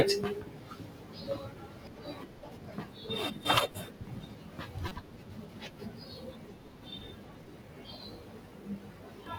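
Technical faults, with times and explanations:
1.87 s, 4.88 to 4.92 s and 9.26 s: damaged data in a compressed stream. At each spot a chunk of the encoded speech stream got corrupted, so the decoder misreads those frames, loses its place and hunts for the next valid frame header. What you hear is a short glitch where the damaged frames briefly break up the audio. The first and last are tiny blips, and the middle one lasts about 36 ms.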